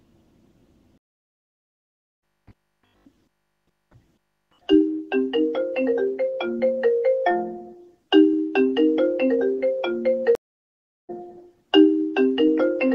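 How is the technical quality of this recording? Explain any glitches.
The recording has two stream reconnect glitches. At 0.98 s the sound cuts to silence for 1.25 s, returning at 2.22 s roughly 0.7 s further along. At 10.35 s a 0.74 s gap ends at 11.10 s, skipping about half a second. Each time the connection dropped, the player reconnected and restarted decoding mid-stream, so material is skipped.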